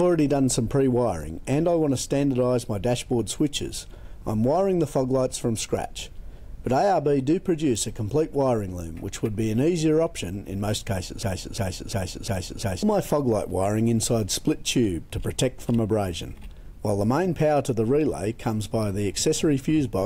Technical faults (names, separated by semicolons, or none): broken-record loop